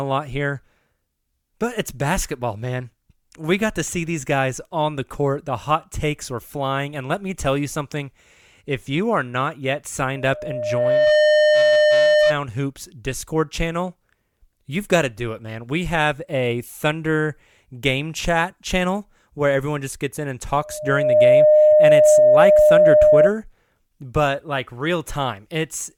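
At 10.15 s a loudspeaker feedback squeal kicks in, a pure tone at 606 Hz that swells over roughly a second to sit about 10 dB above the speech before it drops out at 12.38 s. The mic's hearing its own speaker, and at that one frequency the loop gain tops unity, so the tone feeds itself. It comes back at 20.60 s at the same pitch, ramping up a bit quicker this time, and runs until 23.31 s.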